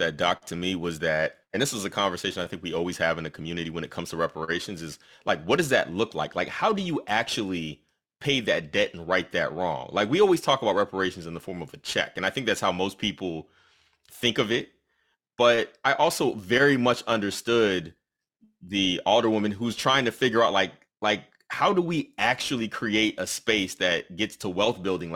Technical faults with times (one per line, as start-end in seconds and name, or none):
0.00-25.16 periodic clock jitter